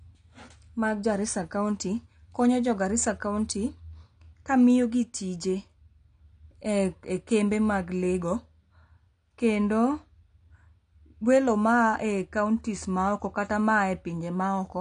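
Right through the speech there's AAC compression damage: nothing above 9.5 kHz and a dull, smeared sound, likely from AAC-LC at around 32 kbps.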